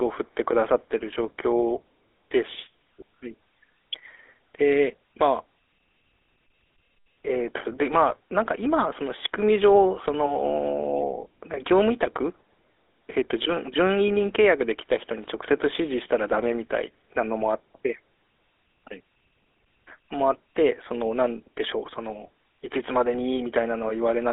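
GSM full-rate codec damage runs through the speech clip from start to end. The codec rebuilds the voice from a vocal-tract filter driven by sparse, regularly spaced pulses. This gives a plainly audible buzzy, gravelly roughness within a 250 Hz to 3.6 kHz band, fitting a 13 kbps stream.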